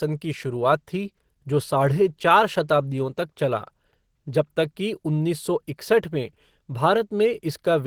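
Throughout the speech, Opus compression is plainly audible, likely from a low-bitrate hybrid-mode encode: muffled, hoarse, grainy texture; a spectrogram shows smeared, noise-filled bands reaching about 20.2 kHz.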